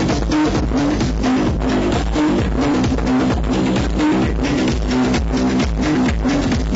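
No technical faults detected.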